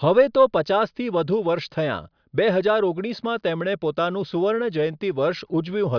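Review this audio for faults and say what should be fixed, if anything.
Nothing in the speech needs fixing. No fault can be heard anywhere in the recording.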